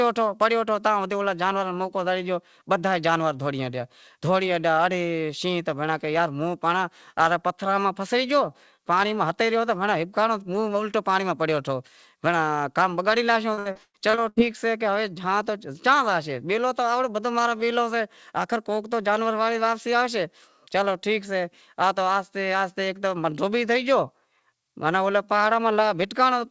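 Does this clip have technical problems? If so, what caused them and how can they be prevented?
Yes. Repeated packet loss (robotic sound) from 13.54 to 14.38 s, right after "کام بگاڑی لاشیو": lost packets left gaps up to 110 ms, patched by stretching earlier audio, sounding choppy and robotic. A more stable network connection and a larger jitter buffer would prevent this.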